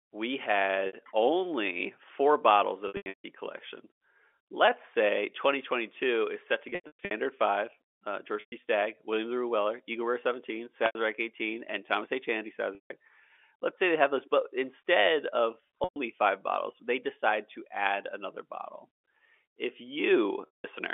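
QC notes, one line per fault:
0.87, 2.88 to 3.24, 6.69 to 7.11, 8.40, 10.86, 12.75, 15.84 and 20.46 s: packet loss with pitch repetition. Gaps of 60 to 300 ms, consistent with 30 ms packets, are bridged by repeating the last pitch period. The 0.87 s gap before "only four bottles" and the one between "those but instead of" and "five bottles they decide" sound like a held, buzzy tone. Longer runs at 2.88 and 6.69 s fade toward silence. Plain dropouts would cut to silence at once, with no held tone.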